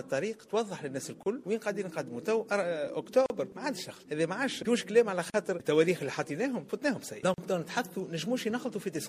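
From the start, the whole clip carries MP3 compression, which fits a low bitrate around 64 kbps. The damage is plainly audible. Quiet high detail flickers in and out between frames. The result sounds watery and swirly, with metallic chirps on hissy sounds and smeared attacks. This is likely the encoder running short of bits and discarding what its hearing model judged least important.

At 1.23 s the sound drops out briefly. This is a gap at a join of encoded pieces. It lasts about 30 ms. The same gap returns every 2 s, at 3.26, 5.30 and 7.34 s, each about 40 ms long. The pieces were encoded separately and joined without trimming. Each keeps the encoder's leading delay and padded final frame. Each gap has smeared edges, then the sound resumes where it stopped.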